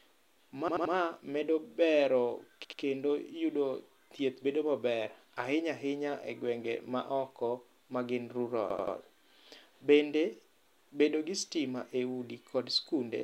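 Hard-edged stutters at 0.68–0.94 s, 2.65–2.82 s and 8.70–8.96 s, where an 85 ms slice of speech plays three, two and three extra times: a repeated buffer, as late-arriving audio forced replays of a block that fits a 4096-sample buffer.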